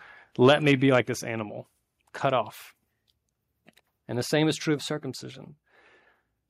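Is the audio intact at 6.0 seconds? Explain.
Yes, the speech at 6.0 seconds is intact, with no fault present at that moment.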